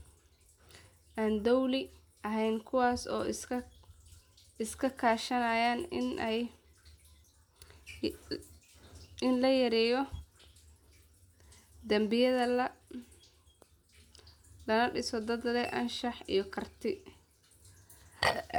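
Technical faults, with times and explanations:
Nothing stood out on listening to this speech recording.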